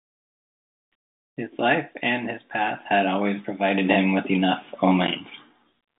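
No technical faults are audible.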